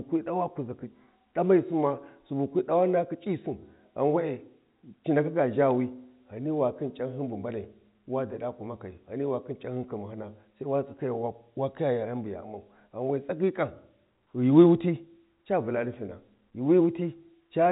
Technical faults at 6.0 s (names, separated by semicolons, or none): none